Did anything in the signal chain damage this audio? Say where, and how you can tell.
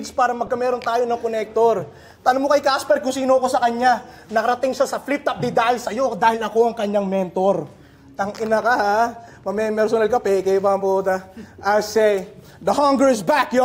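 Yes. A corrupt frame was decoded from 0.46 to 0.50 s, at the codec stage: a short chirp-like burst peaking near -25 dBFS that doesn't fit the surrounding audio. Flipped bits in a few compressed frames were decoded anyway, so misread gains and codes put energy at the wrong frequencies for those frames.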